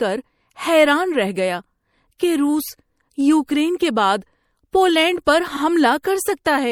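Throughout the clip, the speech carries the marks of what is likely MP3 compression at a low bitrate, consistent with about 64 kbps. Starved of bits, the encoder drops the upper treble above a fixed cut-off and lets weak frequency lines flicker in and out from frame to frame. The damage is plainly audible: a watery, swirling texture under the voice, metallic chirping on s sounds, and softened, smeared consonant attacks.

At 5.55 s, just after "کے بعد پولینڈ پر", the same stretch of compressed frames was delivered twice, so the decoder replays about 52 ms of audio, a length that fits two MP3 frames. The speech briefly stutters. The repeat runs to 5.61 s and leaves the clip about 52 ms longer than it should be.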